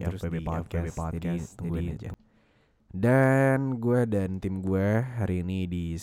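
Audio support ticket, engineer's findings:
Doubled audio track, 0.0–2.14 s: already present at clip start, cuts off abruptly right after "terus di". Full-band copy roughly half a second behind the original, at about equal level. No decay, no room colour. Likely cause: a second capture through a slower path, or an edit holding two out-of-step copies, summed into the mix. Reads as a duplicate signal, not an acoustic echo.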